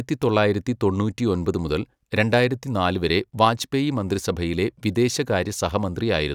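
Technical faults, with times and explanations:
No technical faults can be heard, so there are no times or explanations to give.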